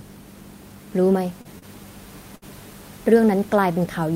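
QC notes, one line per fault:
1.41–1.47 s and 1.59–1.64 s: short concealed packet loss. About 40 ms arrived too late each time. The decoder extended the preceding sound, then blended back, causing a brief smear.
2.36–2.44 s: burst of packet loss. About 60 ms went missing. The receiver held the last sound and faded it, so a buzz or hiss bridges the gap.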